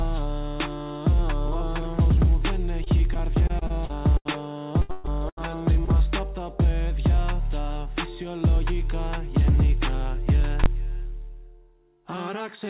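From 2.84 to 4.36 s there is repeated packet loss, heard as robotic sound. Packets went missing nine times in this span. Each hole was patched by extending the last sound. The longest gap is about 79 ms. Around 14% of the stretch is filled in. The result is choppy, with small pieces gone.

A second burst runs from 4.82 to 5.41 s. Here five gaps cover half the span, and the longest lasts 130 ms. The sound is choppy, and larger chunks are missing.

From 5.85 to 5.89 s comes a short concealed packet loss. About 20 ms never reached the decoder in time. The receiver bridged it by continuing the preceding sound and then blended back into the real signal. It is heard as a brief smear or wobble.

From 10.64 to 10.66 s there are invalid numbers at full scale. A calculation produced infinite or invalid values, and these were pinned to maximum output. The block lasts about 21 ms, which fits a 1024-sample processing block. 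Because it is so short, it is heard as one sharp, very loud bang.

All of this sits within a narrowband G.711 A-law call path, so nothing is heard above 4 kHz.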